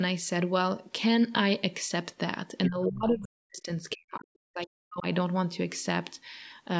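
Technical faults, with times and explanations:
2.68 to 3.71 s and 3.95 to 5.06 s, speech suppressed in double talk: in each stretch the talker's speech sinks sharply, at its deepest by around 40 dB, with roughly a second of each span affected, so parts of it drop out. This is likely the echo canceller reacting to both ends talking at once. Unable to separate the near talker from the loudspeaker's echo, it pulled the whole microphone signal down, taking the wanted speech with it.
3.90 to 3.95 s, other side's voice leaking through: a brief scrap of a second voice slips in between the two suppressed stretches, sitting well under the talker at around 15 dB down. It is likely residual echo. The far end's speech, played from the device's loudspeaker and picked up again by its microphone, was not fully cancelled, so a short fragment survives into the outgoing audio.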